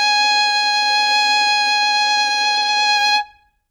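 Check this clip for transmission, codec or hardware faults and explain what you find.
One fault stands out. From 1.77 s to the end, the music is a time-stretched section, running about 1.54 times faster while its pitch holds steady, so it sounds rushed. Software likely squeezed it to fit a length by dropping short pieces. A simple speed-up would raise the pitch, which doesn't happen here.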